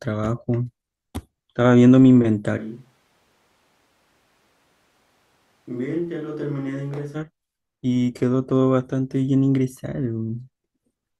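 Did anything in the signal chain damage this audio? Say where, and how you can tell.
Yes. From 2.59 s to 7.14 s the speech abruptly turns roomy and hollow, loses its low end, drops by roughly 10 dB, and sits over a noise floor around 35 dB below the speech. At 7.14 s it snaps straight back. That sudden change in both directions points to the capture stage. The close microphone's feed likely dropped out or was left unselected, so a distant microphone took over and picked up more of the room.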